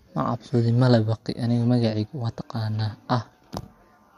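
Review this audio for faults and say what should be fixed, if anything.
No faults turn up in this audio, so nothing needs to be fixed.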